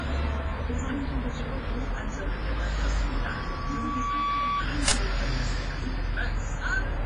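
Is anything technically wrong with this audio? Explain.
Yes, there are three faults.

Throughout, the audio is heavily damaged by what is likely WMA compression at a low bitrate, around 24 kbps. A transform codec starved of bits codes the signal in long blocks and discards weak detail, so quantisation noise smears across tens of milliseconds around each sound. The result is a ringing, washy texture with hiss that pumps along with the material, and nothing at all above 10.2 kHz, which leaves the top end dull.

From 3.15 to 4.66 s there is a loudspeaker feedback squeal. A microphone is picking up the speaker it drives, and at 1.1 kHz the loop gain exceeds one, so that frequency feeds on itself and keeps growing. It is heard as a single tone that swells over roughly a second until it is about as loud as the rest of the sound.

From 4.88 to 4.92 s an uninitialised buffer plays. A block of about 40 ms was sent to the output before any audio had been written into it, so stale memory contents were reproduced as samples. 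This is heard as a sudden burst of harsh digital noise, unrelated to the surrounding sound, lasting that 40 ms.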